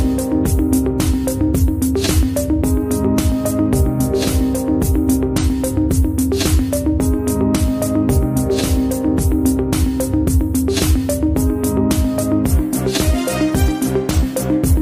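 No technical faults can be heard anywhere in the audio. There is nothing at any point in it that needs to be described as a fault.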